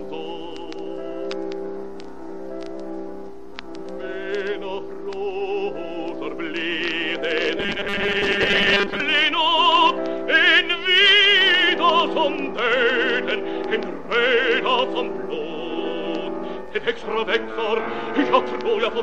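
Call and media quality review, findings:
Robotic sound from repeated short buffers, 7.58–9.00 s. Rigid metallic buzz at 200 Hz, tracking the sound's shape only loosely. Likely cause: playout buffer underrun with concealment looping the last 5 ms segment. About half the audio replaced by repeats, the real audio they stand in for skipped; 5 ms loop fixes the 200 Hz pitch.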